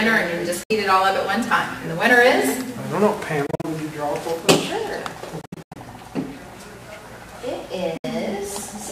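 Four short holes cut the audio, at 0.63 to 0.71 s, 3.46 to 3.65 s, 5.41 to 5.76 s and 7.97 to 8.05 s. The first and last are single clean gaps of about 64 ms. The middle two stutter, with several broken bits over 0.17 s and 0.34 s. Each time the sound jumps ahead as if it kept playing. That's likely a Bluetooth dropout, with packets arriving too late for the headphones and simply being skipped.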